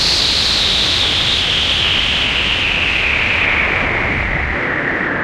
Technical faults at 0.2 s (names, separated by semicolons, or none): none